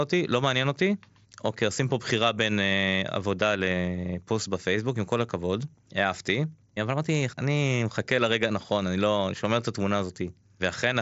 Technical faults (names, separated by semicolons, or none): none